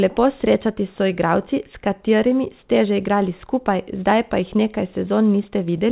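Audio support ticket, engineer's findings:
No faults found in this clip.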